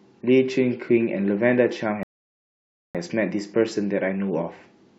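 At 2.03 s the speech cuts to silence until 2.95 s, then resumes exactly where it stopped: a rebuffering stall, the player starved of downloaded audio, adding about 0.92 s.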